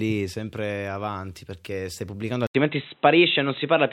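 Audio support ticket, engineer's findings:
Speech turns dull and boxy from 2.47 s to end, after an 80 ms dropout. Nothing above 4 kHz, level shifts by a few dB, faint new noise floor well below speech. Likely input switched to a poorer device, narrowband path replacing original microphone.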